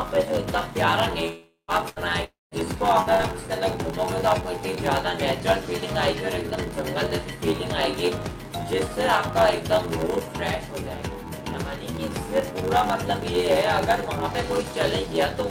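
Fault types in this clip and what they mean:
block size mismatch (padded): Zero gaps fill each block, which fits 512-sample reads. This causes an 86.1 Hz buzz throughout, and the sound runs slower at 0.861 speed.
long network dropout: At 1.27 and 2.24 s, the sound smears into a fading buzz or hiss, then silence, and resumes with audio missing, likely from a long network dropout.
burst of packet loss: At 1.89, 3.00 and 3.13 s, about 60 ms is missing. The last sound is held briefly and fades before resuming.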